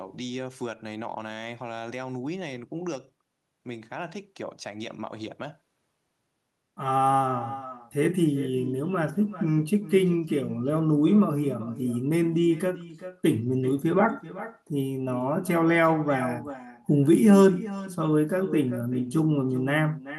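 Speech with echo with no canceller present throughout: each phrase returns roughly 400 ms later as a quieter copy, about 14 dB down, and thinner. The far end's loudspeaker output reaches its microphone and travels back across the network with no echo cancellation removing it.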